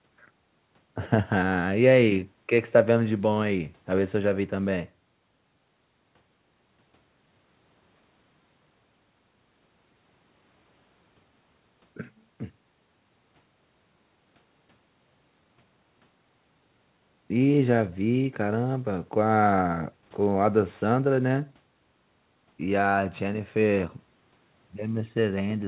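No technical faults can be heard anywhere in the speech. It has come through a call path, and nothing is present above 4 kHz, which fits narrowband G.711 mu-law coding at 64 kbps.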